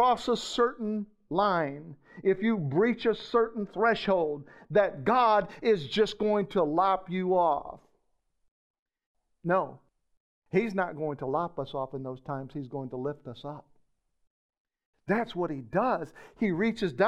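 From 0.97 to 4.97 s, wrongly applied de-emphasis slopes the treble down about 11 dB at 10 kHz, muffling the speech; a spectrogram shows dimmed upper bands.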